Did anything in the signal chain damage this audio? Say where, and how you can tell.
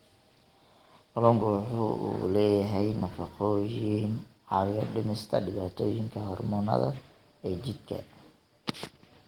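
No, nothing in the chain damaged this speech. The Opus voice compression leaves only light coding traces, and the band stays full, reaching about 20.2 kHz.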